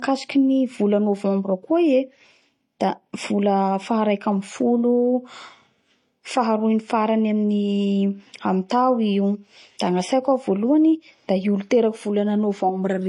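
Throughout the speech, nothing above 11.3 kHz, and two kinds of coding damage sit together: swirly, smeared detail plus a brittle, synthetic top end. This is likely transcoding between lossy codecs, consistent with a low-rate MP3 re-encoded as HE-AAC at a similarly low rate.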